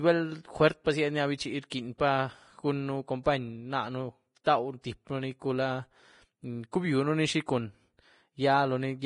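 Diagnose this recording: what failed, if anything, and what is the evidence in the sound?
The speech sounds hissy and grainy throughout, with heavy codec damage: the treble is reduced to a rough noise in place of fine detail, and nothing is present above about 10.6 kHz. The stage is the codec, likely Vorbis compression at a low rate, which fits a bitrate near 30 kbps. At that setting the encoder lowers its cut-off and quantises the upper bands so coarsely that detail is replaced by noise of similar energy.

Four attacks are preceded by a short smear of hiss, the classic pre-echo: at 0.84 s, from 1.70 to 1.72 s, from 4.44 to 4.46 s, and at 6.72 s, just before "cubionuni xi". Each smear spreads 17 to 21 ms ahead of its onset. This also comes from the codec stage. Quantisation noise is spread across a whole transform block, so when a sharp onset lands late in a block, noise scaled for the loud part spills into the quiet moment before it.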